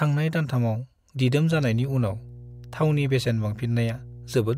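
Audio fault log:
1.5 s to the end, mains hum. A steady low tone at 60 Hz enters and stays under the speech, roughly 20 dB below it. Power-line current is leaking into the signal path, through a ground loop or a nearby transformer, giving a constant buzz.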